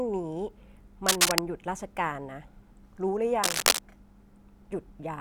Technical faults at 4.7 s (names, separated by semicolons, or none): none